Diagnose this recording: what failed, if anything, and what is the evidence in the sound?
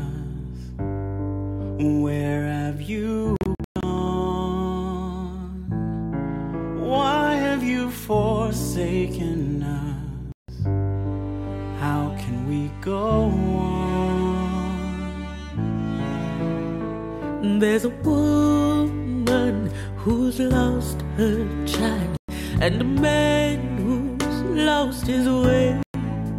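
The sound cuts to silence at 3.36–3.83 s (broken gaps totalling about 0.26 s), 10.32 s (0.16 s), 22.17 s and 25.83 s (0.12 s each), resuming as if it had played on. This is likely a Bluetooth dropout at playback, with late wireless packets discarded. Waveform and spectrogram show hard-edged empty columns.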